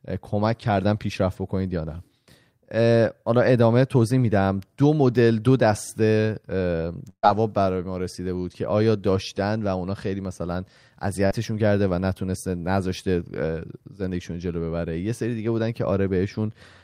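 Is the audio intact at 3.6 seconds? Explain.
Yes, the audio is intact at 3.6 seconds, with no audible fault at that moment.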